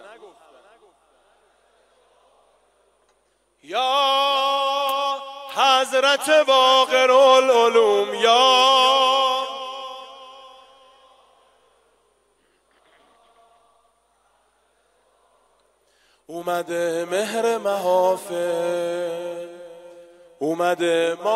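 No technical faults can be heard anywhere in the audio; the signal stays steady and intact throughout.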